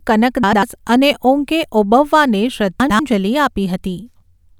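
Speech with two short garbled flutters, from 0.43 to 0.63 s and 2.80 to 3.00 s. Each is frames out of order: two adjacent 96 ms blocks, which fits runs of three frames, play swapped, with no time lost.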